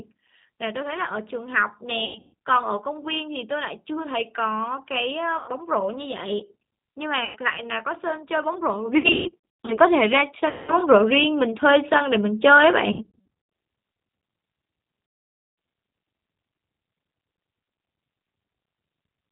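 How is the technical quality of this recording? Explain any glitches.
The recording is compromised: low-bitrate codec damage runs through the whole clip, and seven dropouts break it up.

G.729 codec, throughout: this 8 kbit/s codec rebuilds speech from a tract filter, a pitch predictor and a few pulses per frame, discarding everything above 4 kHz. The result is plainly audible: dull, slightly rough, synthetic-sounding speech.

VoIP packet loss concealed by the speech codec, at 2.0–2.3, 5.4–5.5, 7.2–7.4, 9.0–9.8, 10.5–10.7, 12.9–13.3 and 15.1–15.6 s: lost packets, which fits 20 ms packets, force the decoder to extrapolate and fade, stretching the sound into buzzy or noisy smears, with 100 to 520 ms lost per dropout. The longest continuous one is at 15.1 s.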